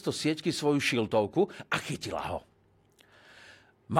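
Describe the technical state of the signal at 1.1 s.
At 1.1 s the speech signal is intact, with no audible fault at that moment.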